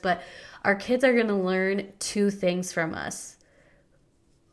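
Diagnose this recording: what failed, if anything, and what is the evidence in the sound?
Nothing failed: no stage in the chain, from capture through to playback, leaves any audible evidence of a fault anywhere in the speech.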